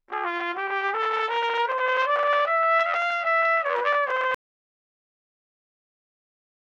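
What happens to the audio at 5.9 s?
At 5.9 s the clip is in an audio dropout to silence that begins at 4.35 s and runs to the end of the file. The sound cuts off abruptly mid-flow and is replaced by silence, with no room tone or noise floor. The likely cause is a lost input, such as a disconnected device or a failed link, while the recorder kept writing silence, so nothing after 4.35 s survives.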